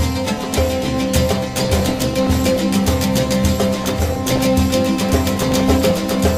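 DAB burbling appears from 1.59 to 2.60 s, 3.68 to 4.46 s and 5.39 to 6.17 s. Residual bit errors of around 0.7, 1.0 and 0.5 percent corrupt MP2 sub-band samples and scale factors, causing short noise blips and level jumps in single sub-bands. A spectrogram shows scattered, frame-length bright and dark blocks in single bands.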